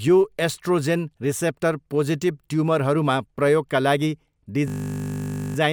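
Right after "पोजिटिभ ट्युमरहरूमा प्रयोगका लागि", at 4.68 s, there's a system hang loop running to 5.56 s. The system froze while playback kept cycling one 20 ms slice of the ring buffer, so the speech turns into a steady 50 Hz buzz.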